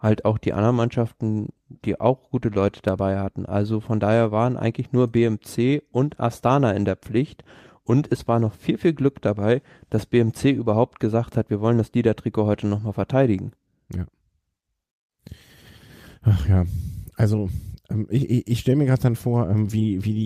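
No technical faults are audible anywhere in the speech recording.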